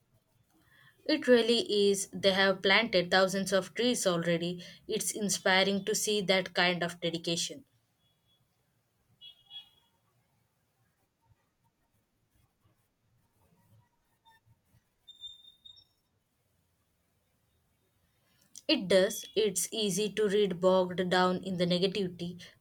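No technical faults occur at any point in this recording.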